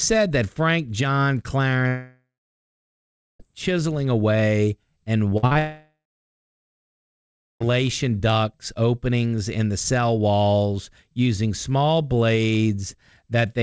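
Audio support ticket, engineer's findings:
Long network dropout, 1.88–3.41 s: sound trails off into a fading buzz, then about 1.1 s of silence; returns at "chiseling away and" with roughly 1.5 s of speech gone. Likely cause: stream stalled, receiver concealment extended the last frame before muting.

Repeated packet loss (robotic sound), 5.29–5.57 s, right after "chiseling away and": choppy stutter. Four short holes, longest 53 ms, about half the span patched by repeating the previous sound. Jitter buffer concealing successive lost or late packets.

Long network dropout, 5.59–7.73 s: same fading buzz into about 1.6 s of silence; picks up at "ducts openings in the", about 2 s missing. Likely cause: a second stream outage handled the same way. Call path runs through G.722, with nothing above 8 kHz.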